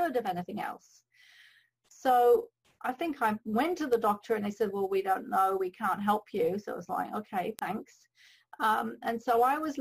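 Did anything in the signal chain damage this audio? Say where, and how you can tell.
Yes. Word clock ticks on an unlocked digital link: sharp single-sample clicks roughly once a second from 0.27 to 8.81 s. The steady spacing suggests about 20 ppm clock drift, not random buffer dropouts.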